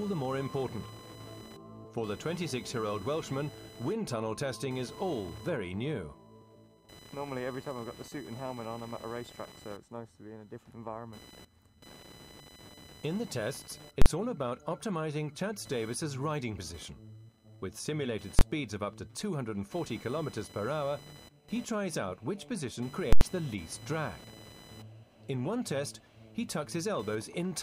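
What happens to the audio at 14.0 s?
At 14.02 s a calculation in the processing produced infinite or invalid numbers, and these were clamped to the largest positive or negative value. The output sits flat at one extreme value, far beyond the audio's peaks, until 14.06 s, a block of about 43 ms that fits a 2048-sample processing block. This invalid-numbers-at-full-scale fault is heard as a very loud pop at each edge, with the sound wiped out between them.

Computer activity noise also runs through this moment. Load changes in the computer move the audio circuit's shared ground, adding a buzz with pulses at around 1 kHz. The buzz sits roughly 20 dB below the sound and follows the machine's activity rather than the audio.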